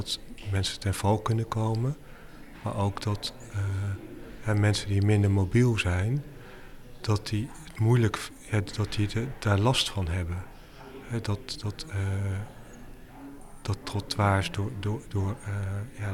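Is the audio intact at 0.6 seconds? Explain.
Yes, at 0.6 seconds the audio is intact, with no dropout, click, distortion or other fault at that moment.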